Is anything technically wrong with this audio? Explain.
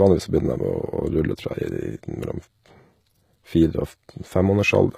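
Yes. HE-AAC compression, throughout: the treble sounds gritty and metallic, with lispy s sounds. This is likely low-bitrate HE-AAC, around 20 kbps, rebuilding the high band by copying lower bands upward, so its harmonics don't line up with the real ones.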